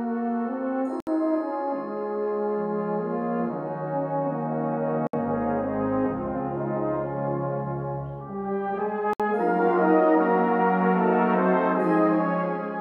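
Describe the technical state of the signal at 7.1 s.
Around 7.1 s the signal is intact, with no audible technical fault at that moment.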